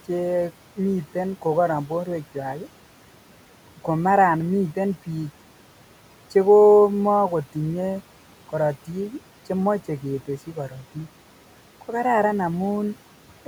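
From start to finish there are noise suppressor artifacts: the room noise, sitting about 20 dB under the speech, gets pulled down about 12 dB between words, then swells back underneath them.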